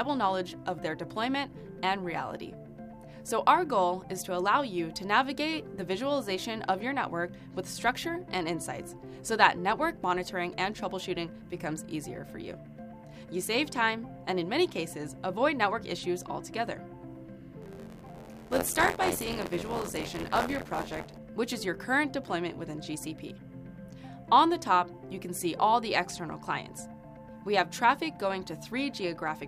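From 17.61 to 21.18 s, buffer tearing: writer and reader slip, so about a fifth of each period replays older audio, making an 86.1 Hz rattle that fits 512-sample buffers.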